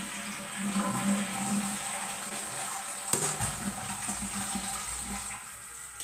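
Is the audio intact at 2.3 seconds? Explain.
No. A short stall from a late packet runs from 2.29 to 2.33 s: the jitter buffer emptied, so the last sound was held about 16 ms, with nothing lost.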